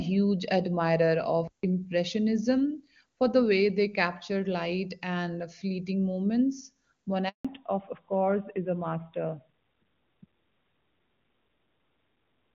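A speech recording carried over a phone call, opening with clear wideband sound consistent with AMR-WB (HD Voice) at a high rate, shows three faults. From 1.48 s to 1.63 s the sound cuts out for about 158 ms, most likely a playback stall in which the player briefly ran short of data or was blocked. The waveform shows a flat line, and the spectrogram a blank vertical band across all frequencies. Right after "light and fleeting moments", a handover gap opens from 7.29 s to 7.45 s. The sound fades within a few tens of milliseconds and stays silent for 160 ms while the call switches networks, and whatever was said in that window is lost. On the waveform this is a short taper into a flat stretch, and on the spectrogram a blank column. From 7.45 s to the end, the call shows a fallback to narrowband. Everything above 4 kHz disappears, and the sound turns duller and rougher, which points to a drop to narrowband AMR. 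The spectrogram shows a hard ceiling at 4 kHz with empty space above it from that point on.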